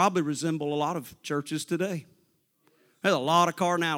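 A short speech recording with no technical faults to point to anywhere in the signal.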